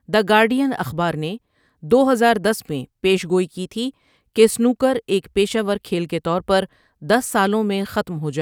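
No technical faults can be heard anywhere in the recording of speech.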